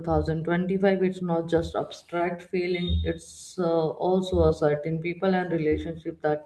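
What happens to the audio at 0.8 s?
Nothing goes wrong at 0.8 s; the speech carries on intact through that moment with no dropout, click or distortion.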